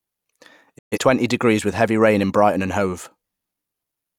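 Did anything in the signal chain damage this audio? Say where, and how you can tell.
Yes. Between 0.77 and 0.99 s the speech fades out over about 20 ms, sits in silence, then resumes further on, with roughly 128 ms of programme simply missing rather than skipped over. This is a digital broadcast dropout at the reception stage: the receiver stopped getting decodable frames, or they failed their checksum, so it muted until clean frames arrived. The length of the gap fits about three lost frames.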